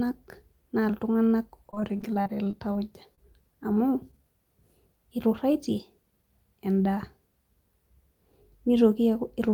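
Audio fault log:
1.67–2.77 s, repeated packet loss (robotic sound): right after "naa iltunganak" the stream keeps dropping out, with a dozen short holes, the longest about 35 ms, each bridged by stretching the previous sound. Roughly a fifth of that stretch is patched, so it comes across choppy and machine-like with bits gone.
3.15 s, short concealed packet loss: a single hole of about 20 ms got filled by carrying the preceding sound forward, then easing back into the real signal. You hear it as a quick smear or wobble.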